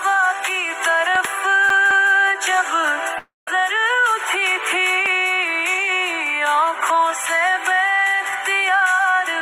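At 1.15 to 1.27 s there is a loud pop, in fact two in quick succession. They stand out by roughly 10 dB over the surrounding sound. The sound keeps going underneath. A sudden voltage step is the likely cause, from a plug, a switch or static. The circuits after it shaped each step into a sharp thump.

From 1.70 to 2.12 s the CD is stuck on one turn. A scratch made the laser jump back at the same spot. So a 213 ms piece of sound plays twice, with a short mute at each jump. The effect is a fast, even stutter, like a skipping disc.

At 3.18 to 3.48 s comes a long network dropout. About 290 ms of sound never arrives, which is likely a network gap. The receiver first continues the last sound as a fading buzz. Then about 150 ms of silence follows. The sound resumes further on, and the missing part is simply gone.

A second loud pop sits at 5.06 to 5.08 s. This one is a single sharp pulse, again roughly 10 dB above the sound. 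It is likely another voltage step from a switch or static. It lands on top of the sound and does not interrupt it.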